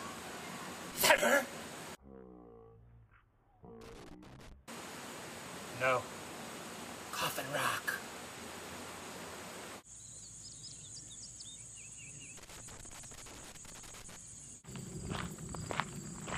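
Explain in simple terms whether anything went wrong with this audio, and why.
Bursts of irregular crackling and scratching break through the sound from 0.91 to 1.22 s, 3.81 to 4.52 s, and 12.37 to 14.16 s. This is loose connector crackle: a worn or dirty plug contact keeps connecting and disconnecting as it shifts, chopping the signal into crackle.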